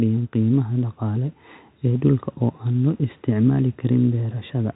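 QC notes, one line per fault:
No faults heard anywhere in the speech.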